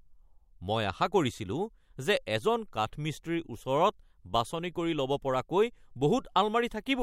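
Nothing in the recording stands out as a technical fault, so there's nothing here to flag.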